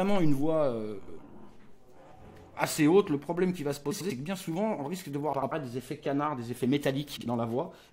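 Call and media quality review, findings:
Frames out of order at 0.99–1.18, 3.91–4.11, 5.33–5.52 and 7.16–7.26 s. Garbled flutter. Adjacent runs of about 93 ms (last about 46 ms) swapped and decoded in that order. No time lost. Spectrogram: swapped blocks, hard vertical edges.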